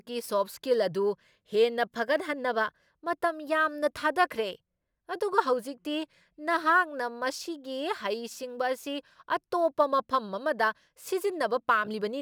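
Throughout the speech, sample clock jitter adds a fine hiss-like roughness, about 40 dB below the signal, as the converter's unsteady timing of roughly 2 µs misplaces samples. Unlike steady background noise, it swells on loud, bright sounds and disappears in pauses.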